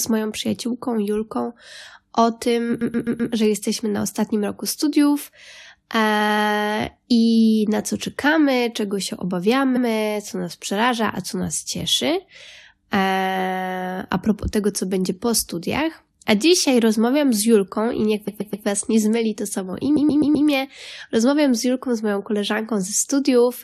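Repeated frames occur at 2.80, 6.20, 9.76, 18.27 and 19.96 s. Each time, a block of compressed speech 128 ms or 85 ms long was sent again and played one to four extra times. Each is heard as a stutter. Together they lengthen the audio by about 1.75 s.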